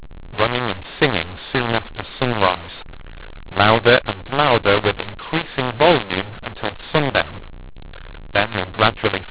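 Speech heard through an 8 kHz G.711 telephone path, so nothing above 4 kHz, is harsh from start to finish because of a mu-law and A-law mix-up: A-law samples are decoded as mu-law, scrambling levels and filling pauses with noise, unlike ordinary clipping, which leaves silences clean.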